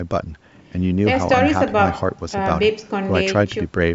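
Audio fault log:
No faults detected.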